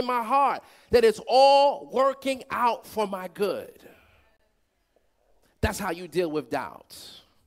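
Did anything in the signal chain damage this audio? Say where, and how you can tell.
Yes. The damage is at the wireless link to playback, a Bluetooth stall. From 4.37 to 4.40 s the speech drops to silence for about 28 ms. It then resumes. That gap with a restart points to a starved receive buffer, not a fault in the recording. The likely cause is radio interference delaying packets. The headphones ran out of queued audio and waited for retransmissions before carrying on.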